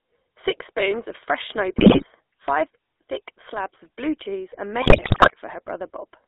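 Speech heard through the GSM full-rate codec for the whole clip. The band runs from about 250 Hz to 3.6 kHz. The coding damage is plainly audible as a buzzy, gravelly roughness on the voice. That texture comes from the codec rebuilding speech from a vocal-tract filter driven by a sparse, regularly spaced pulse excitation, which fits the 13 kbps full-rate scheme. GSM bit errors break in twice. The first runs from 1.78 to 2.05 s, after "spoons of fresh snow" and before "five thick slabs of". The second runs from 4.82 to 5.32 s, after "of blue cheese and". In both the voice collapses into squawks, pops and gargling. Corrupted filter, pitch and gain parameters reaching the decoder distort the spectrum and spike the level frame by frame. The second burst is longer, with an error rate of roughly 8 percent over about two dozen frames.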